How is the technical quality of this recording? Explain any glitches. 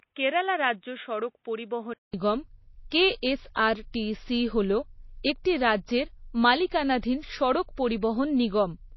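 The recording has plainly audible compression damage throughout, a stretch of narrower, duller sound at the start, and three brief smeared attacks.

From the start to 2.14 s the sound is confined below 3.8 kHz, a few dB quieter, with its own noise floor well below the signal. About 200 ms of silence marks the change, after which the band opens up. The likely cause is the input switching to a poorer device, such as another microphone or a headset's call profile. Unlike codec loss, this narrower band, different tone and separate noise belong to a single stretch and end at a gap.

Across the whole clip nothing is present above 5.8 kHz, and the sound has a watery, swirling texture, with sibilants turning metallic. This likely comes from MP3 compression at a low rate, which fits about 24 kbps. Short of bits, the encoder drops weak frequency lines that flicker on and off between frames and cuts the treble at a fixed point. 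Unlike the device switch, it is constant from start to finish.

Pre-echo appears at 2.90 s, 5.44 s and 8.01 s. A short hiss runs ahead of a sharp attack by 19, 14 and 13 ms respectively, and the onset sounds softened. The transform block spreads noise sized for the loud attack back into the quiet moment just before it. Unlike the steady swirl of the compression, these are isolated smears tied to individual onsets.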